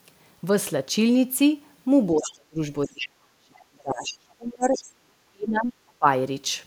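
From 2.15 to 2.58 s there is speech suppressed in double talk. The likely cause is an echo canceller that, with both sides talking at once, could not tell the local talker from the loudspeaker echo and turned everything down. The talker's level sinks by as much as around 35 dB. Inside that dip, from 2.23 to 2.32 s, the other side's voice leaks through: a faint remnant roughly 20 dB below the speech that the canceller likely failed to remove from the microphone.

The suppression returns from 2.86 to 4.8 s, a stretch of about two seconds where the talker again drops away by up to roughly 35 dB. Leakage breaks through twice: from 2.99 to 3.07 s at a stronger level, around 10 dB under the speech, and from 4.64 to 4.84 s at around 15 dB under.

The last episode runs from 4.96 to 6.06 s. For about a second the talker is pushed down by up to roughly 40 dB, the deepest cut in the clip, leaving the speech faint.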